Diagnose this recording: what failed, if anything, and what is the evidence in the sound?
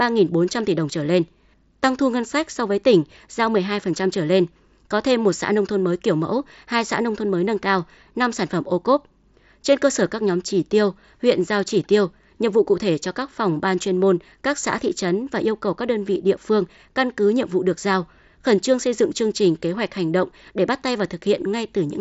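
Nothing failed: the speech has no content above about 7.7 kHz and a faint grain on louder passages, which is the normal sound of a wideband Bluetooth mSBC headset link.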